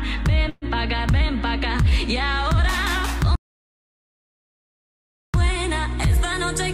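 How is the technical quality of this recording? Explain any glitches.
The recording has two glitches.

From 0.49 to 0.65 s comes a call audio freeze: the last sound smears into a fading buzz or hiss for about 124 ms, likely from a starved jitter buffer, then resumes where it stopped, with nothing lost.

From 3.36 to 5.34 s is an audio dropout to silence, likely a lost input: about 2 s of dead silence without room tone, and unlike the freeze, that material is gone.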